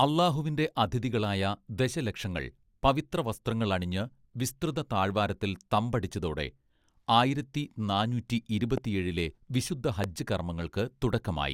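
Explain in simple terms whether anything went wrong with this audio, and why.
Yes, two loud pops cut into the speech: a single sharp pop from 8.78 to 8.80 s and another from 10.04 to 10.06 s. Each is much louder than the talking, which carries on underneath. A loud pop like this is likely a sudden jolt of electricity, perhaps from a plug, a switch or a burst of static, that jumps into the signal and comes out as a brief crack or thump.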